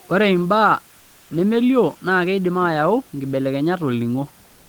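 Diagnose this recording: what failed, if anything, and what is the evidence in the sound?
At the very end of the speech, from 4.45 s to 4.69 s, the room background, sitting about 35 dB below the speech, gives way to a smooth, featureless hiss at the same level for roughly 240 ms. That is comfort noise in place of the background, and the stage is the codec. The likely cause is discontinuous transmission: once the sender judged the sound to be silence it stopped sending, and the receiver filled the gap with synthetic noise shaped to match the background.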